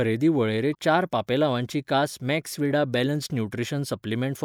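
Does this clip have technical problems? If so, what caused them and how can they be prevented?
Yes. At 0.71 to 0.75 s the speech is interrupted by a brief glitch lasting about 40 ms, caused by damaged data in a compressed stream. Some bytes of the encoded file were lost, zeroed or overwritten, so the decoder could not read the frames at that point, lost sync and had to find the next valid frame header before normal playback resumed. To prevent it, transfer and store the file over a checksummed, error-checked path and verify its integrity before decoding.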